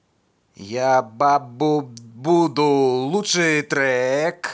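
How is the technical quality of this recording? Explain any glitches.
No glitches can be heard anywhere in this speech recording. There is nothing to explain, as the audio runs without any break or disturbance.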